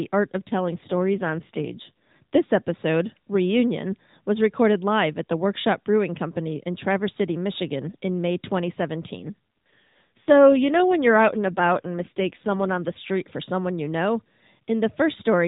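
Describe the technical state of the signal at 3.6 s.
At 3.6 s the speech is intact, passing through the AMR narrowband mobile codec with its usual band limit below 4 kHz and only light coding texture, and no fault occurs at that moment.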